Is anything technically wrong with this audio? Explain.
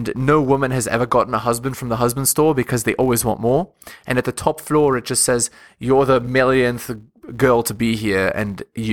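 Yes. Throughout this speech clip, a filter restarted on every block resets at each block boundary, leaving a 172 Hz buzz, consistent with 256-sample blocks. Unlike steady hum, it rises and falls with the speech level.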